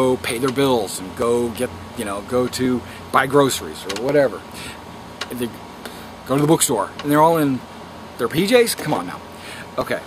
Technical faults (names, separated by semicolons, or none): clock drift buffer slips